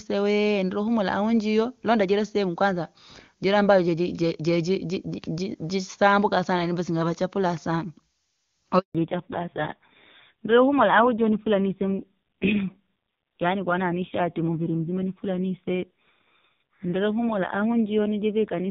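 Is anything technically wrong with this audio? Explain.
Yes. A handover gap runs from 8.79 to 8.95 s: the speech dies away and is silent for 160 ms while the call switches networks. From 8.95 s to the end there is a fallback to narrowband: the clear HD Voice (AMR-WB) sound gives way to audio with nothing above 4 kHz. It is dull and rough, fitting a low narrowband AMR rate around 5.9 kbit/s rather than simple filtering.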